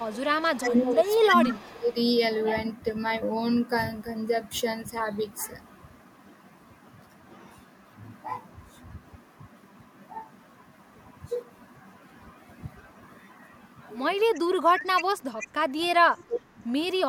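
From 0.0 to 1.92 s there is an echo leak. A delayed copy of the speech trails it by 314 ms, about 15 dB down. The likely cause is a far-end loudspeaker whose echo canceller let some pickup through. From 0.57 to 1.96 s, speech is suppressed in double talk. The talker dips by up to about 20 dB, in pieces adding up to roughly a second. Both sides were likely talking at once, so the canceller turned down both its own talker and the echo. The echo returns from 14.34 to 15.48 s, louder this time at about 10 dB down. The suppression also returns, from 14.44 to 16.48 s, with similar dips. A last faint scrap of echo, about 30 dB down, sounds from 16.16 to 16.24 s.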